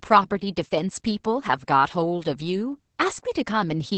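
The clip is speech with Opus voice compression throughout. The band stops near 8 kHz, so sibilants sound dull. The linear-prediction coder quantises the excitation coarsely, making the voice hoarse and slightly robotic. The heavy damage fits a bitrate around 10 kbps.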